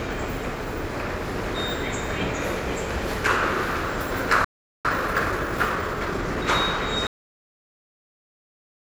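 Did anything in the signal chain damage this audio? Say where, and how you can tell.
Yes. At the playback stage there is a playback stall from 4.44 to 4.85 s: the sound halts mid-flow for about 400 ms, then resumes. The waveform shows a flat gap with no decay tail, and the spectrogram a blank vertical band. Likely cause: the player's buffer ran dry or its thread was blocked.

Right after, from 4.85 to 6.45 s, comes time-compressed catch-up. The player clears its backlog by dropping and cross-fading short slices, so the sound runs at 1.25 times speed without a pitch change. On the spectrogram, events sit closer together while harmonic spacing stays unchanged.

A cut-off end at 7.07 s is also a playback or write-out fault. The final buffers never reached the output, so the sound stops mid-event and drops straight to digital silence. The waveform shows an abrupt vertical edge to a flat line, and the spectrogram goes empty.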